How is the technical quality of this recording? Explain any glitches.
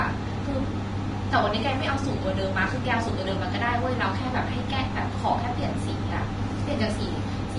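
The recording has two problems: a compression texture throughout, and a short burst of phone interference.

The whole clip is hissy and grainy, with nothing above 10.6 kHz, most likely Vorbis compression at a low bitrate, roughly 30 kbps. The coarsely quantised treble turns detail into noise.

From 1.54 to 2.79 s there's GSM phone buzz, a raspy 217 Hz drone about 19 dB below the speech. A nearby handset's data bursts are being rectified into the audio, so the buzz comes and goes.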